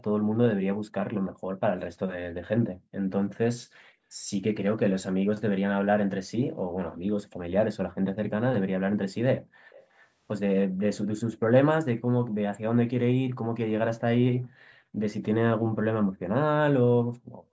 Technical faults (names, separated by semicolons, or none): background gated by the echo canceller; echo leak